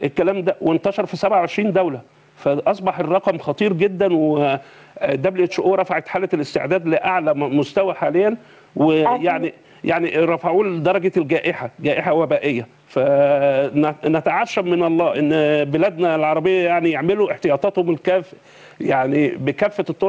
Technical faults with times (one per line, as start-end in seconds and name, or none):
0.00-20.08 gain pumping